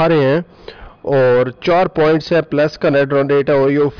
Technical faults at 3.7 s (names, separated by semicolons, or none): none